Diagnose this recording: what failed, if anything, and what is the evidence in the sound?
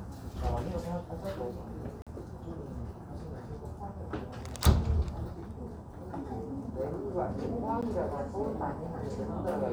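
The failure is at the driver or buffer stage: two blocks of digital silence. From 2.02 to 2.07 s the sound drops out for about 46 ms, a short hole. At 7.81 s a shorter gap of about 12 ms registers as a tick. The signal cuts straight to silence and back with no fade, so the program probably didn't fill the output buffer in time. The two lengths fit 2048-sample and 512-sample buffers.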